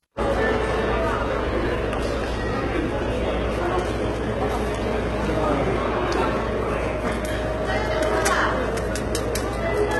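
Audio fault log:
Throughout: HE-AAC compression, heavy. The upper spectrum sounds synthetic and grainy, with nothing audible above about 11.8 kHz. The likely cause is low-bitrate coding around 16 kbps. Only the lower bands are coded. The treble is copied up from them, so its harmonics misalign and sound metallic.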